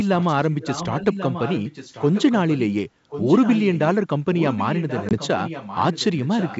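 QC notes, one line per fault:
0.00–0.34, 0.61–2.74, 3.10–3.96 and 4.37–6.58 s: echo leak. A copy of the speech trails about 1.09 s behind, faint in the first stretch and about 10 dB down after that, likely a far-end speakerphone whose echo canceller let it through.
5.09–5.18 s: packet loss on an ADPCM call. A couple of packets drop out as a hard-edged gap. The decoder's predictor loses sync, so sound returns slightly distorted before settling.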